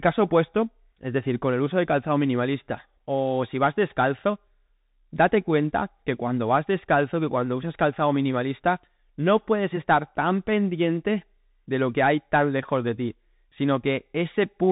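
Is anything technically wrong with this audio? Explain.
Yes. The whole recording has passed through a Bluetooth CVSD headset codec. CVSD codes each sample as a single up-or-down bit with an adapting step size, which fits a 64 kbps headset link. Nothing above 3.8 kHz survives, so speech sounds boxed-in. Sibilants turn scratchy, loud bright sounds distort where the step can't keep up, and a granular hiss sits underneath. A spectrogram shows a hard ceiling at 3.8 kHz, and the waveform looks jagged and stepped.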